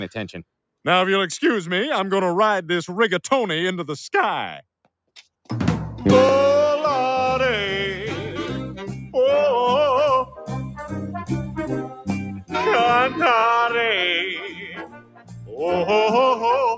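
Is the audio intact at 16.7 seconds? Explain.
No. A noise suppressor applied to music or sounds is active at 16.7 s and throughout the clip. It treats sustained tones and decaying tails as noise and pulls them down by roughly 5 dB while attacks pass, so the sound pumps and thins.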